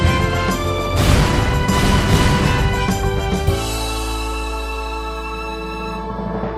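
Nothing in the audio stands out as a technical fault at any point, so there's nothing here to flag.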